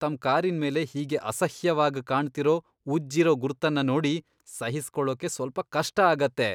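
No technical fault can be heard anywhere in this speech recording. There is nothing here that needs a time mark or an explanation.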